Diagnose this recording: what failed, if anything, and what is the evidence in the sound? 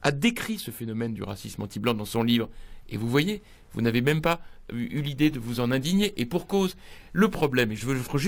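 Crude rate conversion at the sample-format conversion stage, from 1.28 s to the end: a gritty, inharmonic fizz rides on loud and high content, roughly 25 dB down. It fits a 32 kHz to 48 kHz step done by repeating nearest samples without filtering. Unlike codec swirl, the pattern is fixed and steady.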